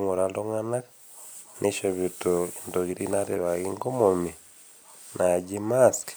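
No technical faults can be heard anywhere in this recording.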